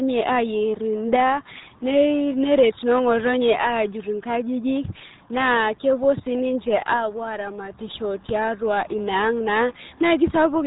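RealAudio 14.4 codec damage runs throughout: nothing above 3.8 kHz survives, and heavy coding at what fits an 8 kbit/s stream leaves the speech muffled and gargly.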